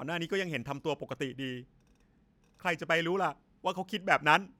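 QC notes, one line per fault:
No faults heard anywhere in this speech recording.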